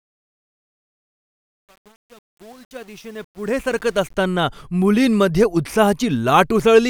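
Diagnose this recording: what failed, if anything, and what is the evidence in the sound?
The fade-in from 0 to 4.14 s shows truncation distortion, gritty and worst until 3.77 s. An undithered gain or format stage fits about 8-bit resolution.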